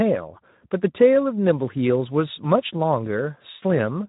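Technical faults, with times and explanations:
Throughout, Speex codec: the speech sounds hoarse and grainy, with plainly audible coding damage. This CELP coder has too few bits to describe the excitation, which fits a low setting near 11 kbps. Nothing is heard above 3.8 kHz, leaving a muffled top.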